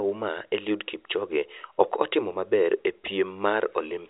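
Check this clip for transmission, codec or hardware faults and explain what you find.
Nothing here points to a fault; the speech sounds like an ordinary G.711 phone line, with the familiar narrow band that stops at 4 kHz.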